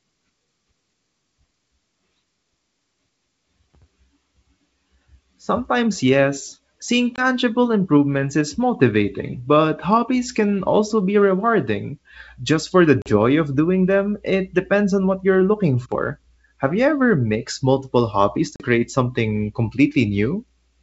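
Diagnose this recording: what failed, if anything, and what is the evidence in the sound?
It's a network problem: packet loss on an ADPCM call, here a G.722 wideband link. There are three hard-edged silent holes: 7.16 to 7.24 s, just before "improvements is motivating but"; 13.02 to 13.16 s, between "for the" and "of doing them it"; and 18.56 to 18.64 s, right after "ever mixed multiple hobbies". The first drop is about 20 ms, roughly one packet. The other two are about 40 ms, a couple of packets. Each hole is filled with silence, so the decoder's predictor and step size drift from the sender's. The sound comes back with a bit of grit, then settles within a few tens of milliseconds.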